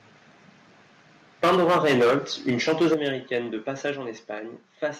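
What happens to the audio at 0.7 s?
Nothing goes wrong at 0.7 s: the speech runs on intact there, with no dropout, click, distortion or other fault at that moment.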